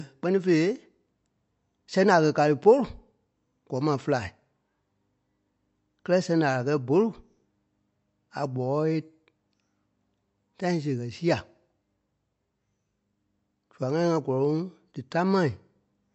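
From start to finish the speech sounds dull and watery, with nothing at all above 8 kHz and a swirling, unstable texture in the upper range that is plainly audible. The likely cause is MP3 compression at a low bitrate, one that fits around 48 kbps: short of bits, the encoder cuts off the treble at a fixed point and drops quiet frequency lines, which flicker in and out between frames and give that swirl.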